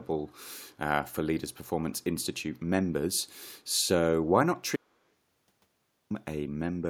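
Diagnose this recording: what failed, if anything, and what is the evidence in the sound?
Echo leak, call processing: faint delayed copies of the speech at 0.28–0.33 s and 1.92–2.03 s, 163 ms behind, very quiet, likely residual from a far-end echo canceller.

Audio dropout to silence, driver or buffer: the speech cuts to silence from 4.76 to 6.10 s, about 1.34 s with no room tone, likely lost input written as silence.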